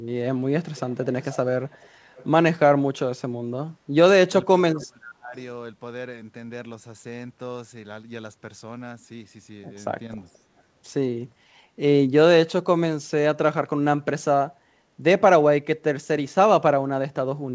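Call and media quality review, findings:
Echo leak, 0.75–1.06 s, 1.22–1.37 s, 1.71–1.9 s, 2.16–2.26 s, 10.33–10.38 s. Faint delayed copy about 485 ms behind, about 25–40 dB below speech. Likely far-end loudspeaker pickup that the echo canceller did not fully remove.

Speech suppressed in double talk, 4.46–5.35 s. Talker dips by up to about 25 dB over roughly 0.7 s while the other side speaks. Likely the echo canceller mistook near-end speech for echo and attenuated both.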